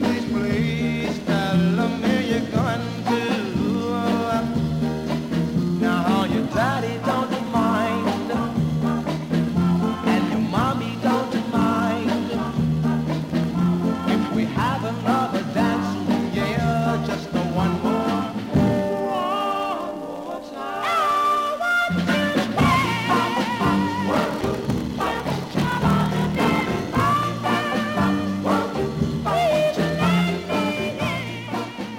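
From 24.10 s to 27.00 s there is a block size mismatch (padded): one processing stage hands over shorter blocks than the next stage expects, and each block is topped up with zeros. That short silent gap repeats every block, producing a steady buzz at 38.3 Hz. The pattern fits 1024-sample blocks being read as roughly 1152-sample blocks, so the audio plays at 0.889 times its normal speed while keeping about its original pitch.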